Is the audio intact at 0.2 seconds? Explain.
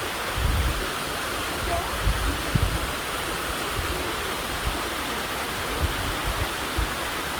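No. At 0.2 s the sound carries Opus compression damage, and it runs through the whole clip. This is likely an Opus encoder working in its music (CELT) mode at a low bitrate, which fits about 24 kbps. The codec keeps each band's energy but runs short of bits. It fills the gaps by copying lower bands or adding noise. The result is plainly audible: tones sound grainy, rough and noisy rather than clean. The bandwidth stays full, reaching about 20.3 kHz.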